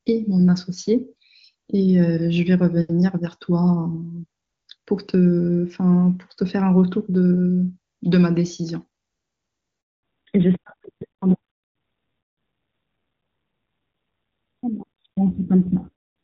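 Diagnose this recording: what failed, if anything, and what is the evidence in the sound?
At the network stage, a handover from one network to another interrupted the call: no speech frames arrived while the link switched over. The sound cuts out at 9.81 s, falls away within a few tens of milliseconds, and stays silent for 220 ms until the new link carries audio again at 10.03 s. Whatever was said in that window is gone, because the missing frames were never delivered and nothing could be decoded in their place.

At the codec stage, the call fell back from HD Voice to a narrowband codec when the new link came up at 10.03 s, and it stays there to the end. Before the gap, the wideband codec sounds clean and open, which fits a high-rate AMR-WB mode around 23.85 kbit/s. After it, nothing is left above 4 kHz, so the sound becomes dull and muffled with a rougher, grainier texture. That points to AMR-NB at a low rate near 7.4 kbit/s.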